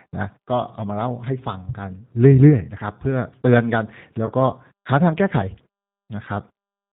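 From start to finish the speech passes through the G.729 codec, running as G.729A at 8 kbit/s, and the damage is plainly audible: a rough, slightly synthetic voice rebuilt from a vocal tract filter, a pitch predictor and a few pulses per frame. A spectrogram shows a hard ceiling at 4 kHz with nothing above it.

From 4.26 to 4.32 s there is VoIP packet loss concealed by the speech codec. About 20 ms of audio went missing, which points to a single lost packet. The decoder extended its last pitch and filter with falling gain, producing a brief stretched sound, a buzzy tone or a coloured noise, that fades before the voice recovers. On a spectrogram this looks like smeared, unnaturally steady sound, and the waveform shows a decaying envelope.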